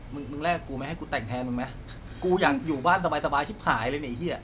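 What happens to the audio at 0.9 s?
Nothing goes wrong at 0.9 s; the speech carries on intact through that moment.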